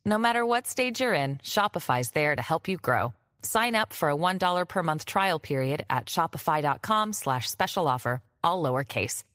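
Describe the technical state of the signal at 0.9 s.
At 0.9 s the speech signal is intact, with no audible fault at that moment.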